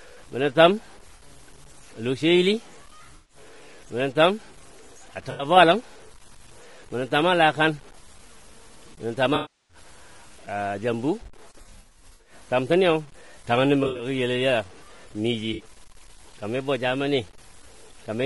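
Speech throughout carries a gritty, rasping grain that rises and falls with the talker and drops out with the signal in pauses, unlike steady hiss. It sits around 30 dB below the speech and is likely low bit depth without dither, consistent with 8-bit truncation. Over that is a different roughness: noisy fill between the voice harmonics and a dull, synthetic-sounding top band rather than level-tracking grit, likely low-delay AAC compression (AAC-ELD) at about 32 kbps. Short smeared, phasey patches replace the speech instead of leaving clean gaps, which marks AAC frame loss with concealment. They fall at 1.15–1.22 s (40 ms), 3.15–3.37 s (140 ms), 5.31–5.45 s (80 ms), 9.35–9.77 s (340 ms), 11.61–12.33 s (360 ms scattered, runs up to about 70 ms), 13.83–14.05 s (120 ms scattered) and 15.53–15.63 s (60 ms).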